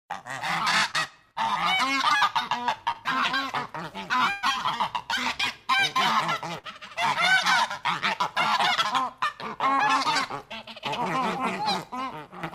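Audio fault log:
0.91 s, 2.17 s, 2.91 s and 9.27 s: short concealed packet loss. At each point roughly 20 to 40 ms of audio failed to arrive in time, and the receiver bridged the hole by extending the sound just before it, then crossfaded back into the real signal. The result is a brief smear or wobble, longest at 2.17 s with 40 ms filled, and a short stretch of audio is skipped. That sets it apart from a burst.
4.31 to 4.44 s and 6.58 to 6.65 s: burst of packet loss. Several consecutive packets were lost, about 120 ms at the first point and 40 ms at the second. The receiver kept extending the last sound as a held tone or hiss, with no silence at the first point, and faded it as the gap went on. The sound then resumes further on, with that stretch missing. The longer fill, the fading and the jump forward distinguish these from the short concealed losses.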